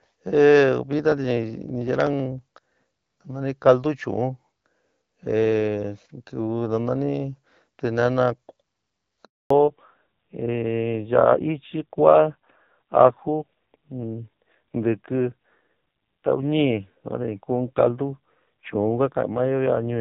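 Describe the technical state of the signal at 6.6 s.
At 6.6 s the speech is intact, passing through the AMR wideband (HD Voice) codec at 12.65 kbit/s with no fault at that moment.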